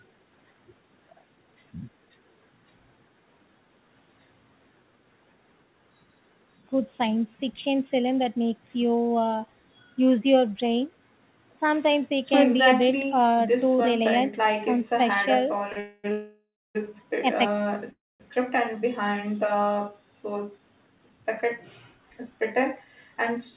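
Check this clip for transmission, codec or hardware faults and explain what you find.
Three kinds of fault cluster in the last third of the speech, all of them timing problems on the receiving side, heard through a narrowband path whose 4 kHz ceiling fits a G.711 call codec.

A short stall from a late packet comes at 15.72 s. The jitter buffer ran dry for 38 ms, so the receiver stretched the last sound until the packet arrived. The result is a brief held, faintly buzzy moment with nothing lost, much shorter than the freezes that follow.

Call audio freezes follow at 15.80–16.06 s, 16.12–16.77 s and 17.91–18.22 s, lasting about 0.24, 0.63 and 0.29 s. The likely cause is packets held up in transit. Each freeze begins as a fading buzz of the last sound. The second ends in about 0.29 s of silence and the third in about 0.22 s. Speech then resumes where it stopped. The length of the gaps sets them apart from the brief stall.

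Jitter buffer speed-ups run from 20.40 to 21.45 s and from 21.92 to 23.52 s. To drain the delay built up by the freezes, the receiver cut many pitch-period slices, shortening the speech by roughly 0.17 s in total. Delivery runs at about 106% speed, sounding slightly hurried with pitch unchanged, unlike a sped-up recording.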